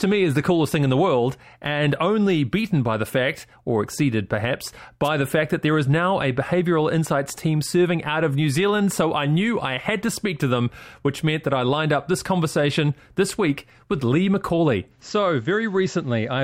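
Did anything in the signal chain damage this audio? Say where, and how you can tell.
Yes. The analogue radio link of a wireless microphone faded briefly, which lets receiver noise through as a wireless microphone noise hit. At 5.04 to 5.09 s, roughly 50 ms, a short swish of static breaks in before the signal recovers.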